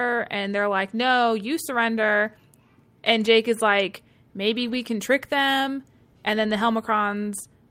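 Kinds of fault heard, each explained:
Lost packet rebuilt from error correction: Around 4.63 to 4.73 s the speech turns briefly rough and noisy but never drops out. A few packets went missing, and the decoder played the lower-quality backup copies carried in the following packets. About 60 ms were rebuilt this way.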